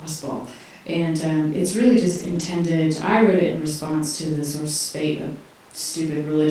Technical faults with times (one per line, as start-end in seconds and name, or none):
2.07-2.45 lost packet rebuilt from error correction
3.87-4.01 lost packet rebuilt from error correction